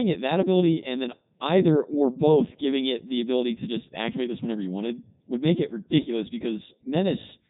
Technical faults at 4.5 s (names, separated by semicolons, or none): Codec 2 vocoder